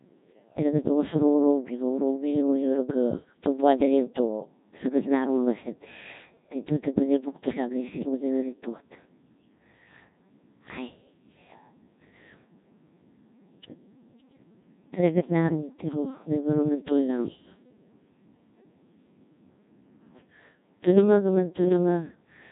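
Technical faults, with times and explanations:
Throughout, Codec 2 vocoder: the speech has that robotic, buzzy quality you get when the decoder rebuilds the voice from sine waves using only pitch, voicing, energy and a rough spectral envelope, so the original waveform never survives. The damage is heavy and there's nothing above 3.8 kHz, and the 1.6 kbit/s mode is starved enough that the voice turns synthetic.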